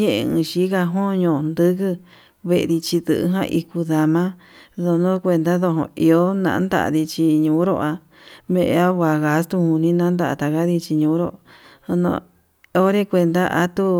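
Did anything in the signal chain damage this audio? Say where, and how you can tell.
No, none of the stages in the chain, from capture through to playback, leaves any audible damage on this speech recording.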